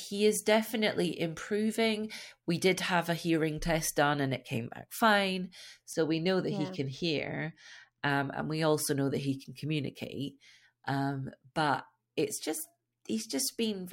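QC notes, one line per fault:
5.93–8.10 s, channel delay (comb filtering): one channel runs a couple of samples late, only about 0.05 ms, and when the two are summed to mono the shared speech cancels at evenly spaced frequencies. With so tiny an offset the first notch sits high, around 10 kHz, so the speech turns dull, losing its top-end air. On a spectrogram a fixed dark band near 10 kHz appears across this span; the waveform shows no break.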